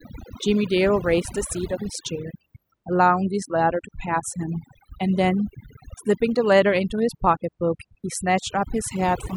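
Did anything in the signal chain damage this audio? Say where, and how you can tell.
Yes. Overdone noise removal at the call processing stage: a suppressor set far too aggressively pulls frequency bands down whenever they sit near its noise estimate, taking quieter speech detail with them. Throughout, the background drops and breaks up into twinkling specks.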